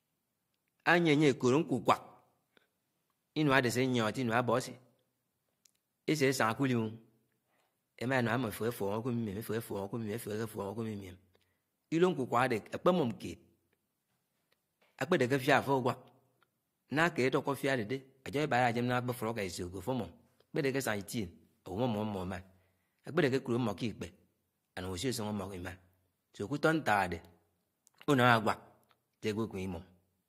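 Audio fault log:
No audible faults detected.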